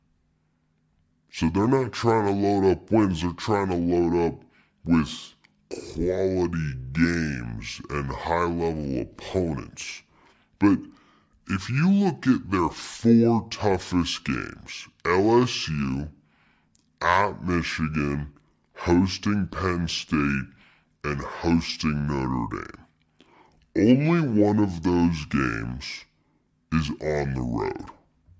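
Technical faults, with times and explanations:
Throughout, wrong sample rate: the speech runs at about two-thirds of its proper speed and sits about 7 semitones low, so every syllable is drawn out and voices sound deep and sluggish. Speed and pitch have dropped by the same ratio, with no conversion applied, which fits audio made at 24 kHz being played back at 16 kHz. Timing is stretched and spectral content compressed together across the whole clip.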